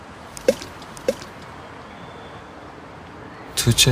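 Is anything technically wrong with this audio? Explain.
Yes. A doubled audio track runs from 0.63 to 2.41 s: a second, full-band copy of the sound trails about 0.7 s behind at roughly 5 dB lower. It is likely captured again through a slower path, so it sounds like a dry, undecayed repeat that starts and stops abruptly.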